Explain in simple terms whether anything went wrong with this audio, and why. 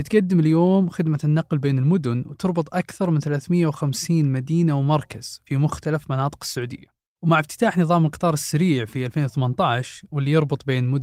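Nothing went wrong: no audible technical fault turns up anywhere in the speech.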